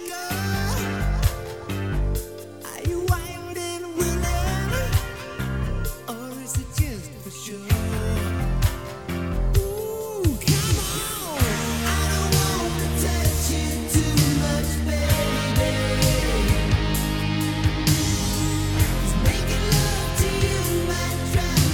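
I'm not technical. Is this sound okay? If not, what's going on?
Yes, nothing in the recording points to a technical problem with how the sound was captured, processed or delivered.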